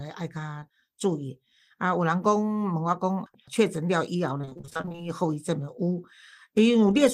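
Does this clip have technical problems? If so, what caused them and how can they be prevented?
Yes. At 0.59 to 0.63 s there is a brief smear in the speech, a short concealed packet loss. About 20 ms of audio arrived too late for the decoder, so the receiver continued the preceding sound to fill the hole and then blended back into the real signal. Between 4.37 and 5.01 s the speech turns choppy and robotic, which is repeated packet loss. Packets went missing again and again in quick succession, with gaps of up to about 23 ms. Each one was patched by extending the last sound, so roughly half of that stretch is synthetic fill rather than real speech. A steadier network path, a larger jitter buffer or forward error correction on the call would prevent both.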